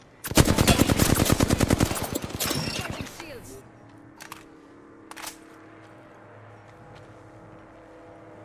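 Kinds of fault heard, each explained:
No fault can be heard anywhere in this audio.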